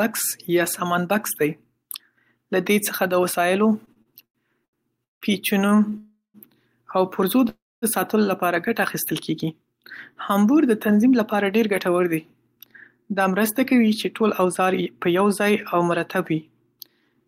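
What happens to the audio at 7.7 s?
At 7.7 s the speech stalls: from 7.49 to 7.85 s the last sound is drawn out into a brief fading buzz or hiss that drops to silence for roughly 230 ms, and then the speech picks up exactly where it left off, with nothing lost. This is a call audio freeze, likely caused by packets held up in transit until the jitter buffer ran dry. About 330 ms of filler was inserted, so everything afterwards runs that much later.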